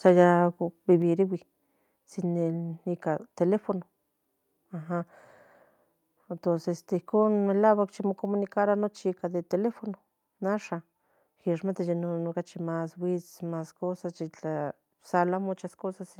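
Right at the start of this speech recording, from 0.07 to 0.1 s, there's a brief harsh crackle that points to microphone overload, with peaks likely pushing about 1 dB past the converter's limit and a small share of samples flattened. Then at 1.02 s everything drops about 4 dB in one step, voice and background together, which sounds like microphone volume stepped down, likely the call software reacting to that clipped peak.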